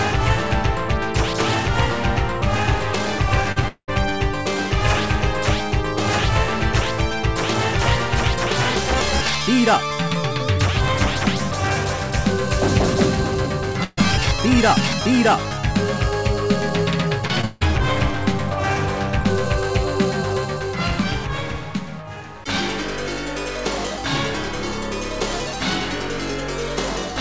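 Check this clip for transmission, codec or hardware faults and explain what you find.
There are network faults in this one: two stretches of repeated packet loss and one short burst of packet loss, all on a call path where nothing comes through above 8 kHz.

Repeated packet loss (robotic sound) hits twice, from 3.52 to 3.90 s and from 17.28 to 17.63 s. Each stretch has three gaps close together. The receiver patches every hole by stretching out the last bit of audio, then the next hole arrives before things recover. In the first stretch the longest gap runs about 200 ms and around two-thirds of the span is filler. The second stretch tops out at 160 ms with about half patched. Both come out choppy, with chunks missing.

The burst of packet loss runs from 13.84 to 13.99 s. Roughly 140 ms of audio never made it in time, so the receiver kept extending the last sound while fading it down. You hear a held, dimming buzz or hiss, then a tiny 10 ms dropout to silence before the audio picks up further along. 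Whatever fell inside that gap is simply gone.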